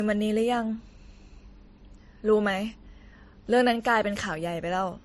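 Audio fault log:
throughout, transcoding between lossy codecs: nothing sounds above 13.1 kHz, and two different kinds of coding smear overlap. This likely comes from WMA audio re-encoded to low-bitrate MP3.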